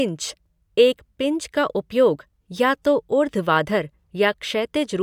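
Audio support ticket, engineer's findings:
Listened to the whole speech clip and nothing turned up on this one, so no findings to log.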